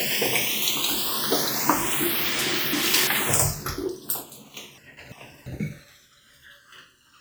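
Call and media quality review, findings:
Slow flanging sweep throughout, audible when summed to mono. Channels drifting apart: separate device clocks, roughly 150 ppm apart, so the inter-channel delay creeps up to under a millisecond.

Jumbled moments at 2.39–3.07 s and 4.78–5.46 s. Chunks out of order: a 341 ms chunk plays one slot late, leaving hard joins at each swap.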